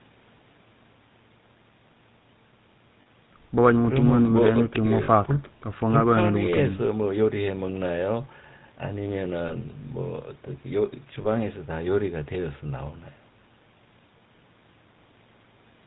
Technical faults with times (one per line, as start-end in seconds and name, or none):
0.00-15.87 GSM full-rate codec
3.02-3.07 lost GSM frames
5.04-5.09 lost GSM frames
9.48-9.53 lost GSM frames
11.22-11.26 lost GSM frames